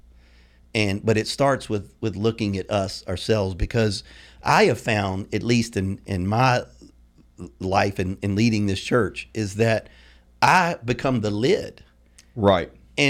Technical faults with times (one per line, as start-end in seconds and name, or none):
10.43-10.59 hard clipping
12.48 hard clipping